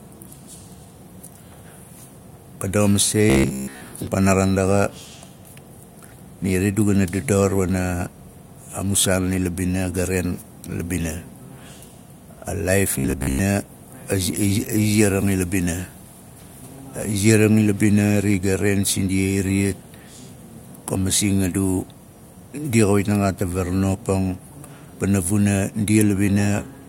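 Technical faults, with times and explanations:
3.30–3.81 s and 12.99–13.39 s: robotic sound from repeated short buffers. The speech becomes a rigid 66.7 Hz metallic buzz, likely from a 15 ms buffer replayed while most new audio is skipped.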